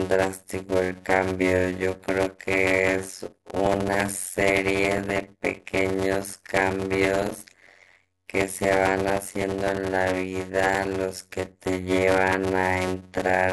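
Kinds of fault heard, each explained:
Block size mismatch (padded): short blocks zero-filled to a longer read size cause a steady 92 Hz buzz and speech slowed to 0.53× with its timbre kept.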